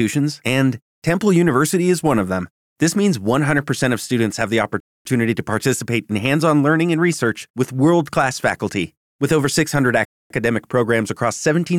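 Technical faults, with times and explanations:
4.80–5.05 s and 10.05–10.30 s, gap between chunks: the speech stops dead for 250 ms at each join of 5-second chunks. Unlike a dropout, nothing is missing; the sound resumes exactly where it paused.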